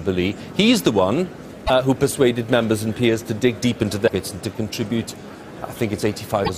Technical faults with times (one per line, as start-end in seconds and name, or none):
1.63-1.70 damaged data in a compressed stream
4.04-4.10 damaged data in a compressed stream
6.41-6.50 damaged data in a compressed stream